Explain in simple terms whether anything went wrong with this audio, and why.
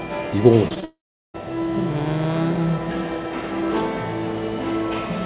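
Something did go wrong. At 0.68, 0.74 and 0.80 seconds there is short concealed packet loss. About 20 milliseconds of sound went missing each time and was patched over, leaving brief smears or wobbles. Then, from 0.84 to 1.36 seconds, the sound stretches on briefly as a fading continuation of the last sound and then goes silent for roughly four tenths of a second. This is most likely a long network dropout, where a chunk of audio never arrived. Throughout, the call line keeps nothing above 4 kHz, so the sound is a bit dull.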